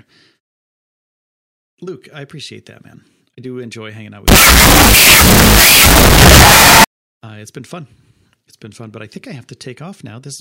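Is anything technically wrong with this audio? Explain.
Yes. From about 4.28 to 6.84 s, right after "do enjoy hanging out" and before "uh it's been fun", there's a wrong sample width fault: 16-bit audio read back as unsigned 8-bit. The mismatched bytes turn into loud noise, with the buried speech playing at half speed, so it's pitched down.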